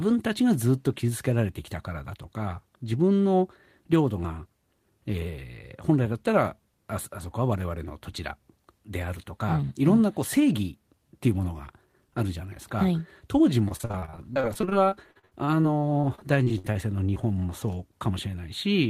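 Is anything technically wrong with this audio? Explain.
Yes, there are two related faults. Repeated packet loss (robotic sound), 13.65 to 16.77 s: dozens of dropouts, up to 59 ms, are patched by stretching the preceding audio, leaving choppy speech with pieces missing and about a quarter concealed. Short concealed packet loss, 17.15 to 17.18 s: about 20 ms went missing and was filled by extending the prior sound, producing a brief smear or wobble.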